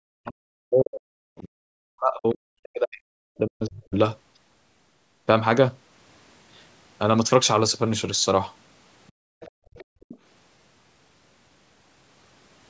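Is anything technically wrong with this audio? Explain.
Yes. There are three kinds of fault, all tied to echo cancellation on a call.

Speech suppressed in double talk, 0 to 3.94 s: the speech dips deeply, by roughly 40 dB at worst. Both ends likely talked at once, so the canceller turned everything down.

Other side's voice leaking through, at 2.3 s, 9.07 s, 9.4 to 9.51 s and 9.74 to 10.18 s: brief scraps of a second voice come through. The first two are very faint, the later two louder. This is likely loudspeaker echo the canceller missed.

Background gated by the echo canceller, 9.12 to 10.0 s: the room sound drops out by about 32 dB for under a second. The canceller clamped the microphone while the far end played. The band stops at 8 kHz, from the call's normal microphone processing.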